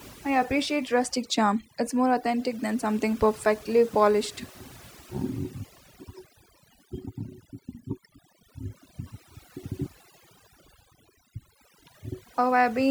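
Overdone noise removal runs the whole way through: bands near the noise floor got gated out, so the background sits in twinkly near-silence and quiet parts of the voice go with it.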